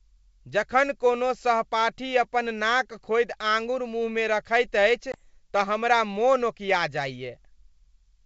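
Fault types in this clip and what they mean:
Packet loss on an ADPCM call, 5.12 to 5.23 s: a hard-edged 20 ms hole, about one packet, is filled with silence. The decoder's adaptive predictor and step size drift from the sender's, so the speech comes back slightly distorted until they realign.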